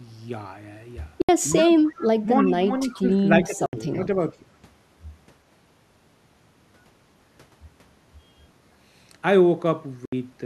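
Speech, and there are three things going on. First, Bluetooth dropouts: the sound goes dead for about 70 ms at 1.22–1.29 s, 3.66–3.73 s and 10.05–10.13 s, then picks up as if it had kept playing. That's likely a few packets not reaching the headphones in time, about three each go. Second, an echo leak: a faint copy of the speech trails about 308 ms behind at 1.51–1.65 s, 1.85–1.92 s and 3.92–3.96 s. It starts around 15 dB under the speech and gets much quieter later on, which is likely the far end's echo canceller letting some loudspeaker pickup slip through. Third, speech suppressed in double talk: the talker ducks by roughly 10 dB, about 15 dB at worst, in patches at 1.52–1.7 s, 1.96–2.28 s, 2.45–2.69 s, 2.9–3.23 s and 3.45–4.08 s. That's likely the canceller turning everything down while both sides talk over each other.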